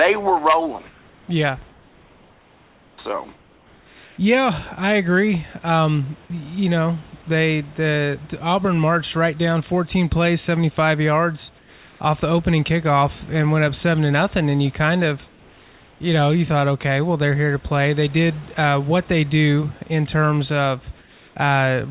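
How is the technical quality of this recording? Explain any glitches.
The quality is affected by one recurring glitch: in the pauses, the real room background gives way to a smoother synthetic hiss. The audio carries nothing above 4 kHz, as expected from a narrowband G.711 call path.

Comfort noise in place of the background appears at 1.7 to 2.98 s, at 3.36 to 4.18 s (ending just before "I agree"), at 11.58 to 12.0 s, at 15.28 to 16.0 s (between "you kind of" and "know you thought okay"), and at 20.98 to 21.36 s (after "they do in terms"). The likely cause is discontinuous transmission. The sender stops sending during silence, and the receiver generates noise roughly matching the background, which here sits about 30 dB below the speech. In these gaps the textured room sound turns flat and featureless. It drops about 2 dB, or about 3 dB in the 15.28 s gap, then snaps back when speech resumes.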